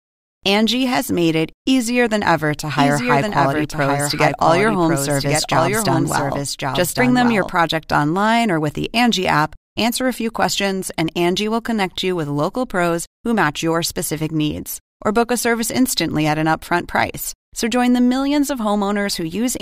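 From 2.77 s to 7.51 s, a doubled audio track is heard, likely because the speech was captured a second time through a slower path and mixed back in. A full-band copy trails the original by about a second, roughly 5 dB quieter, with no decay or room colour. It appears abruptly after "easier than ever to" and vanishes just as suddenly before "online or with the", so each phrase is heard again as a flat, overlapping echo.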